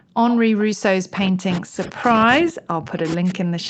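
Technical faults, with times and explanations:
0.00–0.15 s, background gated by the echo canceller: while the loudspeaker was playing, the echo canceller clamped the microphone, pulling it down by about 40 dB. The room sound at the very start of the speech drops out for roughly 150 ms, then returns once the canceller releases. It is heard as a brief hole of near silence before the room sound comes back, a gating effect rather than a natural pause.
0.29–0.39 s, echo leak: the far end's echo canceller likely failed to remove all of the loudspeaker sound its microphone picked up, and the remainder was sent back down the line. A short scrap of delayed speech, arriving 440 ms after the original and sitting about 15 dB below the main voice, appears for a tenth of a second. It sounds like a faint repeat trailing behind the talker.
0.89–2.06 s and 2.24–3.70 s, speech suppressed in double talk: both sides were likely talking at once, and the echo canceller could not tell the local talker from the loudspeaker echo, so it turned everything down. 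The voice sinks by up to roughly 40 dB, for around a second in the first stretch and again through the end of the clip. It dips as the canceller pulls it down. The call path's Opus coding, with nothing above 8 kHz, sits under all of this as a limited top end.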